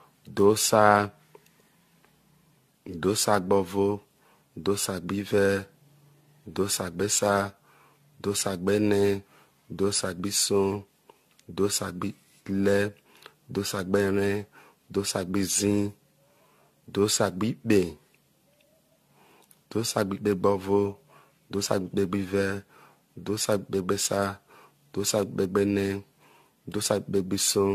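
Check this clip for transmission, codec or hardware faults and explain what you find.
There's one fault, and it runs through the whole clip: generation loss. The speech has a swirly, hollow, smeared quality, with consonant attacks blurred and nothing above 14 kHz. That's more damage than a single lossy pass should leave. It's likely the result of repeated AAC-LC decode and re-encode cycles, something like seven of them, with a bandwidth that fits roughly 64 kbit/s. Each pass requantises on a shifted frame grid, so the noise keeps piling up.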